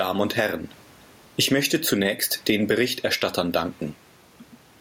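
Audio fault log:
throughout, gain pumping: the gain ducks around 10 dB under each loud syllable, likely a fast limiter fighting input gain set too hot.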